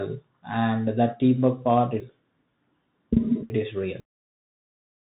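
A speech recording carrying the sound of a Bluetooth CVSD headset codec from start to finish, consistent with a 64 kbps CVSD link. The codec sends one bit per sample to nudge the level up or down with an adapting step. It passes nothing above 3.8 kHz, so a spectrogram shows a hard ceiling there with empty space above. Loud high-frequency moments overrun the step size and distort, s sounds come out scratchy, and a fine granular hiss sits beneath the speech, visible as a speckled noise floor across the band. From 2.0 to 4.0 s, just after "and that teamwork part", the chunks are out of order. A half-second block is delivered late, three chunks behind where it belongs, and plays after the audio that should follow it. Nothing is missing, but the phrase sounds jumbled. On the waveform, three abrupt discontinuities mark the joins, each seen on the spectrogram as a thin vertical line where the formant patterns break without transition.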